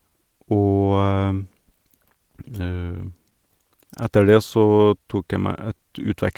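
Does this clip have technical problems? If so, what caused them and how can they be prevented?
Yes. The clip has clock drift between sender and receiver throughout: the sender's clock runs roughly 4 percent slower than the receiver's, so the receiver's jitter buffer keeps draining and has to be topped up. The speech drags slightly. On a waveform, syllables stretch a little unevenly. On a spectrogram, formant tracks show occasional doubled slivers instead of smooth continuations. Preventing this requires locking both ends to a common clock, or running adaptive resampling that tracks the rate difference.

Repeated timing corrections run from 0.10 s to 5.78 s. To stay in step with the slow sender, the receiver repeats short pieces of audio, always padding in the same direction and at uneven intervals. This adds around a fifth of a second overall and plays back at 97 percent speed. A waveform shows brief duplicated cycles at irregular points, and a spectrogram shows short repeated vertical slices. 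Smooth, continuous resampling in place of discrete repeats would prevent these corrections.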